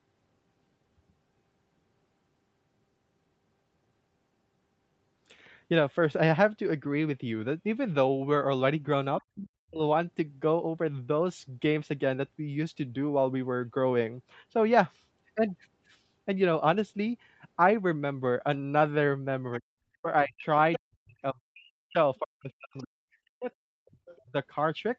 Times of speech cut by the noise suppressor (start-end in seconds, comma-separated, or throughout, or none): none